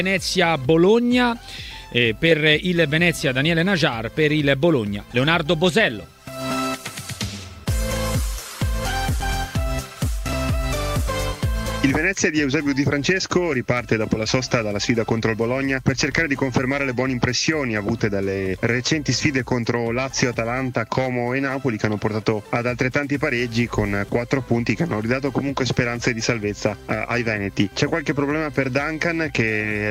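Nothing in the audio stood out as a technical problem on listening.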